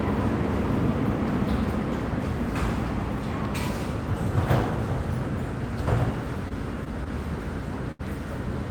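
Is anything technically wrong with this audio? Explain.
Yes, there are two short stalls from a late packet. At 6.48 to 6.53 s and again at 7.92 to 8.01 s, a packet missed its playout time and the jitter buffer ran dry. The receiver held the last sound for 22 ms, then 77 ms, and resumed exactly where it paused, so nothing is lost but playback slips later by that much. Each gap sounds like a brief freeze with a faint buzz or dip, the second clearly longer.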